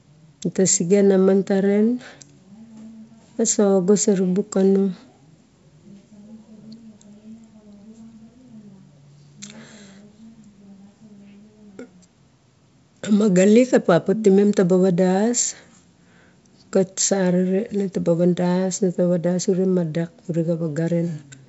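No technical faults can be heard in this speech clip. It carries the bandwidth of G.722 wideband telephone coding, reaching up to about 7 kHz, and any coding hiss in the upper band is faint at most, which fits the full 64 kbit/s mode.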